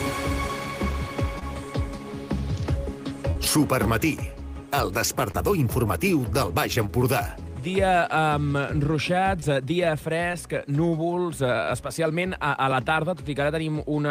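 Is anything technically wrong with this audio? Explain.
Yes. Short concealed packet loss occurs at 1.39, 3.31, 5.31, 6.86, 9.40 and 10.32 s. Each time, roughly 20 ms of audio (40 ms at 3.31 s) arrived too late and was patched by extrapolating the preceding sound, giving brief smears or wobbles before the audio resumes.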